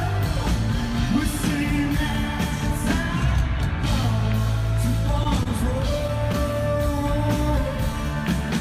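At 5.23 to 5.27 s and again at 5.43 to 5.48 s, there is a short stall from a late packet. Each time, a packet missed its playout deadline and the jitter buffer ran dry. The receiver stretched the last sound, by 17 ms and then 24 ms, and resumed from the same point once the packet arrived, so nothing is lost. Each stall is heard as a brief hold on the sound with a slight buzzy smear or dip, and the playout delay grows by those same amounts.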